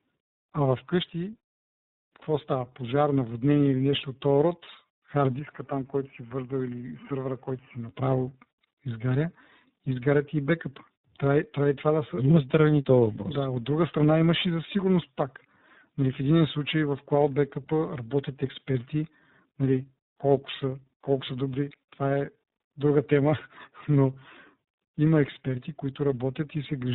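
Throughout, the speech has been through tandem speech coding: it was decoded and re-encoded across several links, with three speech coders in a row, which fits a chain ending in iLBC. Each stage degraded the last one's output, leaving rough, warbly, muffled speech with nothing above 3.8 kHz.

From 5.39 to 7.89 s, the input most likely switched to a poorer device. The band narrows further, with nothing above 3 kHz, so the sound turns duller and boxier. It gets slightly quieter and picks up faint new background noise, with no gap at the switch.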